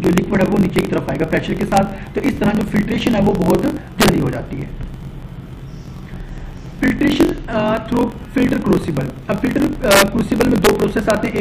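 Throughout the clip there is a block size mismatch (truncated). One stage writes blocks larger than the next stage reads, which fits 1024-sample writes, and each block's tail is discarded. The result is a 45.9 Hz buzz and playback running 1.07 times fast at near-normal pitch.

Integer overflow occurs at 0.18, 0.78, 1.77, 3.50, 4.02 to 4.09, 9.91 to 10.02, 10.41 to 10.69 and 11.10 s. Peaks pushed up to about 3 dB past the integer limit wrap to the opposite sign, producing harsh, violent cracks far sharper than clipping.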